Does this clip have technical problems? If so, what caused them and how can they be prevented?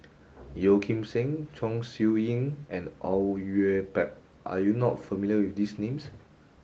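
No, the speech has only the light, full-band character of Opus voice compression, with nothing that needs correcting or preventing.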